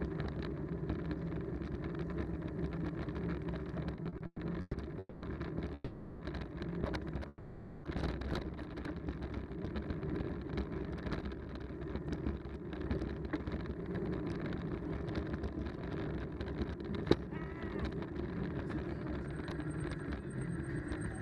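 From 3.95 to 4.75 s there's repeated stalls (stutter): six short gaps, the longest 120 ms, with about 320 ms of stretched-out filler making up roughly 40% of that stretch. Packets were arriving too slowly, so the buffer kept running dry and the sound drags and hiccups.

Then come three call audio freezes, at 4.99 to 5.24 s, 5.74 to 6.22 s and 7.28 to 7.86 s. Each holds the last sound as a fading buzz for 230, 460 and 560 ms. The first trails into a brief silence before resuming. The likely cause is packets held up in transit. Nothing is lost, but each freeze pushes the playback later by its own length.

From 9.83 to 15.24 s the jitter buffer speed-up kicks in. To shed that built-up delay, the receiver trimmed tiny pitch-period slices over and over, roughly 0.7 s in total. The audio runs at 113% speed with unchanged pitch and sounds noticeably rushed.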